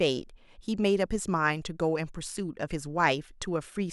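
No technical faults can be heard anywhere in this speech recording. There is nothing here to place in time order.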